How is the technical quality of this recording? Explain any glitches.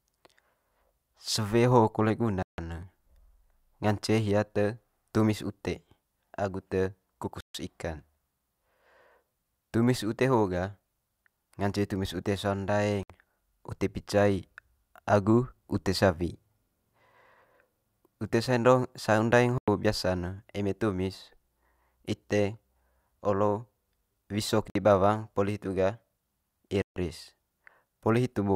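The speech is interrupted by six brief dropouts, which are most likely Bluetooth stalls. Radio interference probably delayed packets on the wireless link, so the receiver's buffer emptied and playback halted until retransmitted data arrived. Each time, the speech cuts to silence and then resumes: at 2.43 s for 155 ms, 7.41 s for 140 ms, 13.03 s for 66 ms, 19.58 s for 95 ms, 24.70 s for 53 ms, and 26.82 s for 143 ms.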